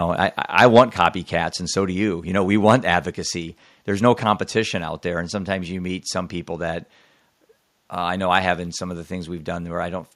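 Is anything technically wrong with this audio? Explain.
Yes. Two kinds of fault can be heard in this speech.

Microphone overload occurs from 0.58 to 1.06 s, just before "and so do you", and again from 2.69 to 2.71 s, right after "you you know we". The input level was likely set too high. Peaks pushed about 5 dB and then about 2 dB past the converter's ceiling, so a small share of samples were flattened. The waveform shows squared-off tops, the spectrogram shows smeared high-frequency harmonics, and the loudest syllables sound harsh and crackly.

A microphone volume step-down happens at 0.79 s, in the middle of the first overload. The most likely cause is the call software reacting to the clipping by lowering the device's input gain in one move. The level drops by about 3 dB: the waveform envelope shrinks abruptly, the spectrogram dims across all frequencies at once, and the voice and background both sound suddenly quieter.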